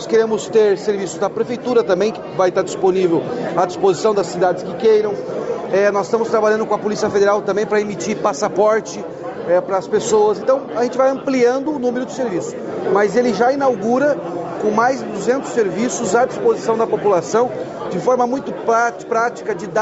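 Nothing stood out on listening; the audio sounds as expected for a call, with the top end limited at about 8 kHz.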